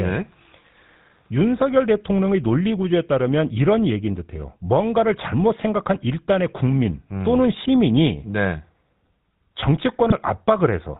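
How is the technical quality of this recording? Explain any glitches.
The quality's rough: the whole clip carries plainly audible GSM full-rate codec coloration, plus one brief glitch near the end.

GSM full-rate codec: throughout, the speech sounds buzzy and gravelly, with nothing above 4 kHz. That's the pulse-driven vocal-tract model at work, consistent with a 13 kbps GSM link.

GSM bit errors: from 10.10 to 10.13 s, a short squawk or pop. Corrupted bits hit a single decoder frame, briefly throwing off its spectrum and level.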